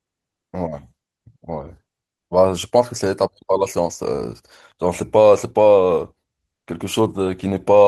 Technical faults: none

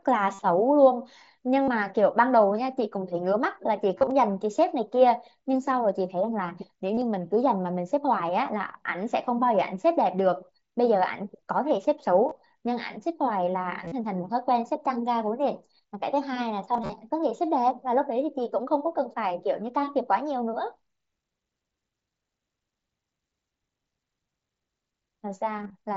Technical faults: concealed Bluetooth headset packet loss

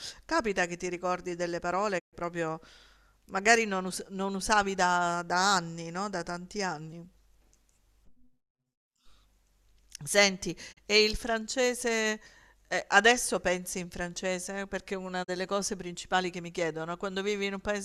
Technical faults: digital broadcast dropout

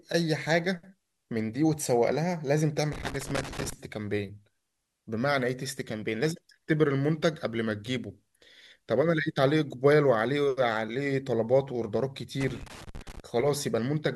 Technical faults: loose connector crackle

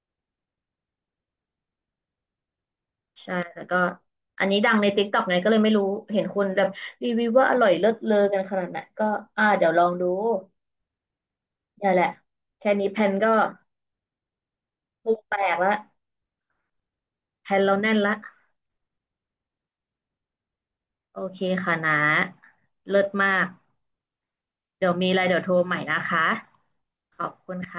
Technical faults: none

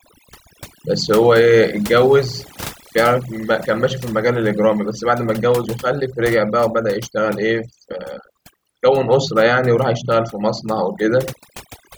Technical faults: overdone noise removal

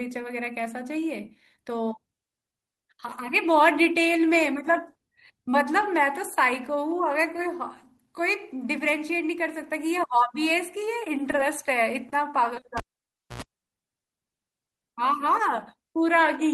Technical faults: short stall from a late packet; short concealed packet loss; cable pulled and plugged in

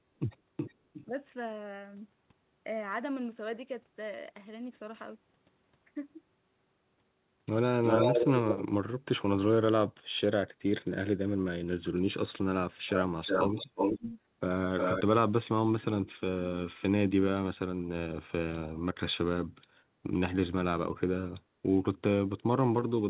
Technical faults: echo leak; speech suppressed in double talk

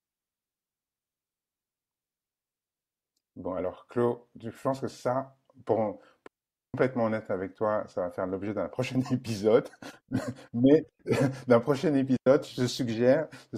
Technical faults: digital wireless dropout

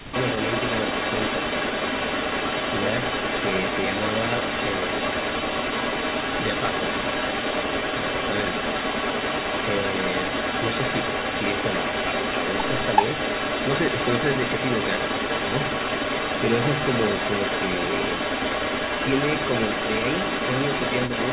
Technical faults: speech suppressed in double talk; echo leak

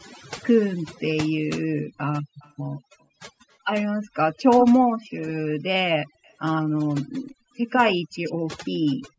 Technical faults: overdone noise removal; echo leak

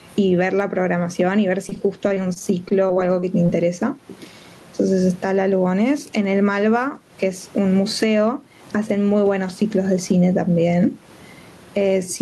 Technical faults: gain pumping; repeated packet loss (robotic sound)

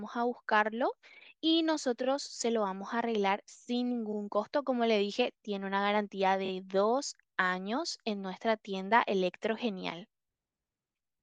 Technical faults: repeated frames

